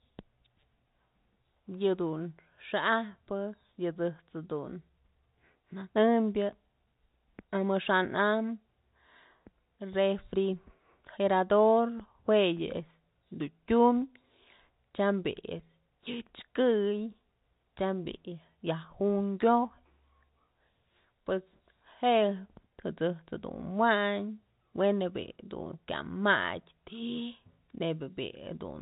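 No technical faults can be heard in this speech, which comes through the 64 kbps G.711 mu-law telephone path with its usual narrow band.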